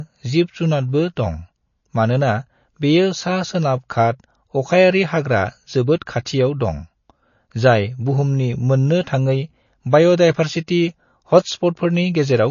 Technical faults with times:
0.00-12.51 MP3 compression
6.25 pre-echo

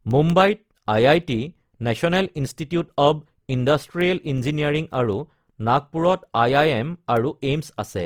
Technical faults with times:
0.00-8.05 Opus compression
0.11-7.91 word clock ticks

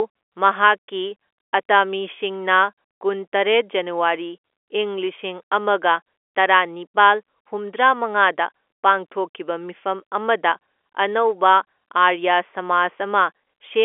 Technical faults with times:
none

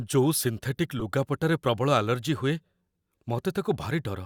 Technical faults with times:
0.99-1.02 corrupt frame decoded
2.17 corrupt frame decoded

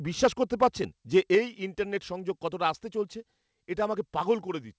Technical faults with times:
0.62-0.67 microphone overload
1.16-1.35 microphone overload
1.35 microphone volume stepped down

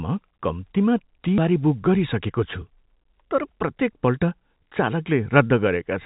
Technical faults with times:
1.38-1.40 skip ahead
3.43-4.08 jitter buffer speed-up

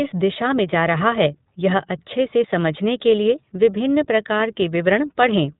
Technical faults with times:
0.00-5.60 iLBC codec

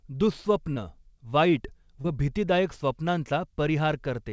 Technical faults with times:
0.74-0.78 short concealed packet loss
2.02-2.06 short concealed packet loss

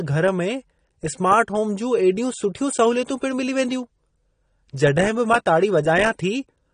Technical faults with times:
0.00-6.73 AAC compression

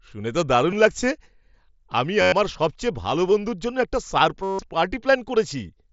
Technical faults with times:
0.71 concealed Bluetooth headset packet loss
2.22-2.32 concealed Bluetooth headset packet loss
4.43-4.59 concealed Bluetooth headset packet loss

